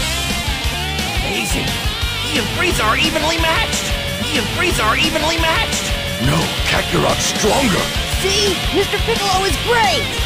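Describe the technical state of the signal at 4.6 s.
A stream segment repeat runs from 4.18 to 6.18 s, so at 4.6 s the audio is replaying material already heard. The player queued the same segment twice, adding about 2.0 s of duplicated sound, with a small blip at the jump back.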